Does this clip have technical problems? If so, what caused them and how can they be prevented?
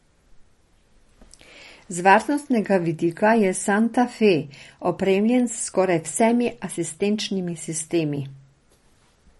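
Yes. Across the speech, nothing sounds above 11.5 kHz, and the audio is watery and swirly. The likely cause is MP3 compression at a bitrate that fits about 40 kbps. Short of bits, the encoder cut the treble and switched weak frequency lines on and off. Encoding at a higher bitrate prevents this.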